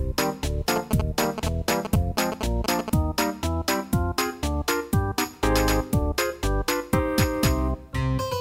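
A nearby 2G phone's radio bursts, rectified by the audio circuit, cause GSM signalling bursts from 0.76 to 2.90 s: galloping ticks and 217 Hz buzzes, nearly as loud as the sound.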